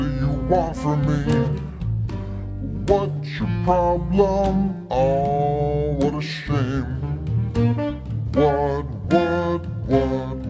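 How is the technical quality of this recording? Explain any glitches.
There's one clear problem running the whole way through. A wrong sample rate throughout plays everything at two-thirds speed and about 7 semitones low, which fits 24 kHz audio played back at 16 kHz without conversion.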